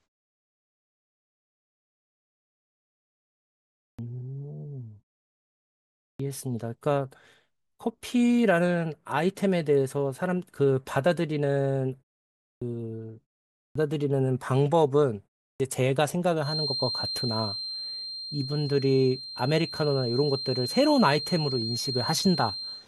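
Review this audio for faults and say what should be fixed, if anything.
Clipped start after a pause hits five times: at 3.9, 6.11, 12.53, 13.66 and 15.5 s. Each time the speech comes back out of silence already underway, with roughly 85 to 99 ms of its onset gone, so the first sounds are shaved off. The output device seems to drop into a sleep state during the gaps, which here run from 0.3 s up to 3.9 s, and it needs that fraction of a second to wake and lock before anything gets through. Worth fixing by disabling the device's idle power saving, or by keeping a low-level signal running so it never goes to sleep.

There's also a feedback whistle from 16.39 s through to the end of the clip: a thin, steady tone at 4.2 kHz sitting about 10 dB below the speech, swelling and fading slowly in level but never building up. That's likely a loudspeaker-to-microphone loop hovering just short of runaway, so one frequency keeps ringing without taking off. 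To prevent it, bring the mic gain or monitor level down, separate the speaker from the mic, or notch out that band.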